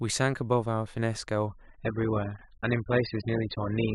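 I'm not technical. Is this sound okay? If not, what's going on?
No. From about 1.47 s to the end, the speech suddenly turns dull, with nothing above 5.1 kHz. This is an adaptive stream at a lower bitrate: the connection slowed, so playback switched without a gap to a cheaper, lower-quality version.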